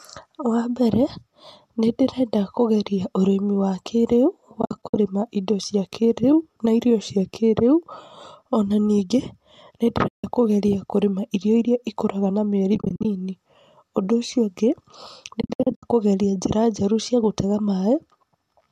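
AAC frame loss with muting breaks the speech at 4.62–4.96 s, 10.08–10.24 s, 12.75–13.05 s and 15.41–15.83 s. Lost frames were zeroed by the decoder, so overlapping windows fade each gap out and back in, leaving soft-edged holes, several in scattered bursts, that are likely from a low-delay AAC stream.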